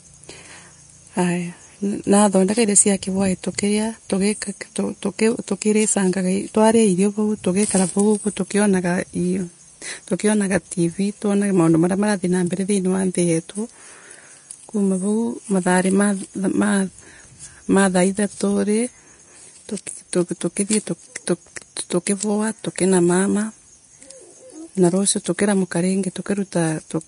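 Throughout the speech there is nothing above about 10.6 kHz, and the remaining treble sounds hissy and grainy, with roughened tones and softened consonant attacks. This is likely Vorbis compression at a low setting, consistent with roughly 35 kbps, replacing fine high-frequency detail with noise.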